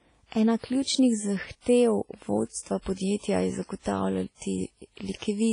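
A speech recording with heavy transform-codec damage throughout: ringing, washy texture, signal-following hiss, and nothing above 10.1 kHz, likely from WMA compression at a low bitrate around 24 kbps. Pre-echo appears from 1.61 to 1.66 s, where quantisation noise spreads about 50 ms ahead of an attack as short hiss and softens its onset.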